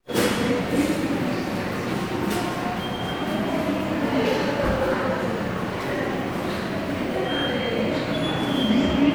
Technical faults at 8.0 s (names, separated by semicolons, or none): none